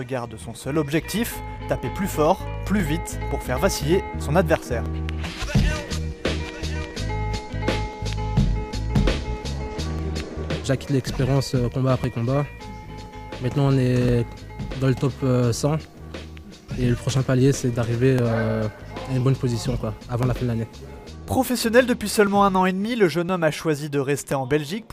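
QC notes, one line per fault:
0.76–24.32 s, periodic USB or driver dropouts: about a millisecond of audio is skipped every 1.02 s, around twenty times. Something blocks the audio path at a fixed interval. Each gap splices the waveform, so regular ticks sound wherever signal is present.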